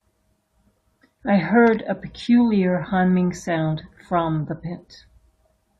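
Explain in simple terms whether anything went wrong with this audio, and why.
At 1.67 to 1.75 s the speech breaks into a short burst of scratchy noise. That is loose connector crackle: a worn contact briefly cutting the signal on and off.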